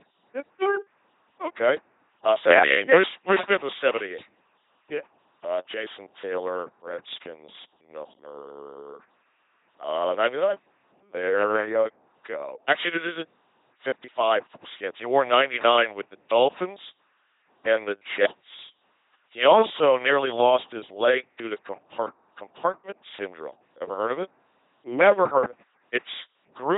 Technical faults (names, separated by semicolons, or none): LPC-10 vocoder